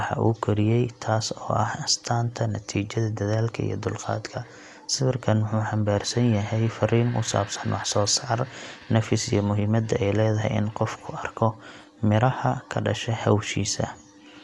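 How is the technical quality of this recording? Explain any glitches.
The recording has plainly audible codec damage throughout. The speech sounds dull, with nothing above about 11.5 kHz. A rough, fluttering noise clings to tonal parts. This is likely Dolby Digital compression at a low bitrate, around 64 kbps. The encoder narrowed the band. Many frequency lines got no mantissa bits, so the decoder filled them with noise.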